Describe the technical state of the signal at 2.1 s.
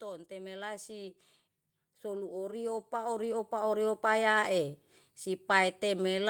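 At 2.1 s the signal is at the start of an automatic gain rise. It runs from 2.02 s to 4.06 s. The gain control has judged the input too quiet and is pushing its gain up step by step, by about 10 dB in total. At 2.1 s that climb has only just begun. The speech and the background noise swell together over those two seconds, so the level creeps upward rather than jumping.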